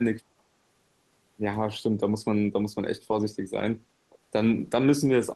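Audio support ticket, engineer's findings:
Speech suppressed in double talk, 0.37–0.43 s: brief level dip of about 15 dB. Again at 4.09–4.19 s, deeper, about 25 dB. Likely echo canceller/suppressor treating near-end talk as echo while far end also active. Distinguished from gain or AGC pumping by its short, gated shape.

Lost packet rebuilt from error correction, 3.11–3.13 s and 4.51–4.53 s: single 20 ms frame each, rougher and noisier but no gap or drop in level. Opus decoder playing the low-bitrate in-band FEC copy carried by the next packet. Distinguished from packet-loss concealment by the absence of a smeared, buzzy or fading tail. The copy holds real signal, only coarser.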